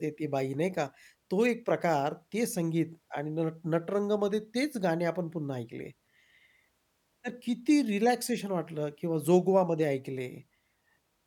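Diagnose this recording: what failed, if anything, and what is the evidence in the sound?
Nothing failed: no stage of the chain, from analogue wiring through conversion, buffering, processing and transmission to playback, leaves any detectable trace on this speech recording.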